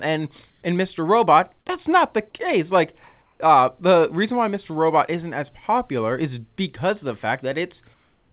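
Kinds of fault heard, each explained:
Comfort noise in place of the background: at 0.50–0.62 s, 3.22–3.40 s and 7.94–8.33 s the background turns into a flat, featureless hiss about 1 to 4 dB quieter. The sender likely stopped transmitting in silence, and the receiver synthesised noise roughly matching the background.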